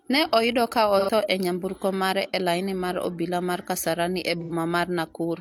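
Speech with two brief smeared, phasey patches at 0.99–1.10 s and 4.40–4.52 s: AAC frame loss with concealment, the decoder refilling roughly 85 ms gaps, consistent with two lost frames, from the last good spectrum.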